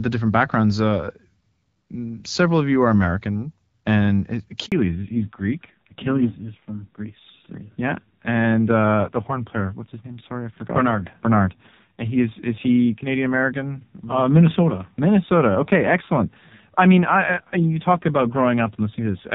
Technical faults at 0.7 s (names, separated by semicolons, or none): none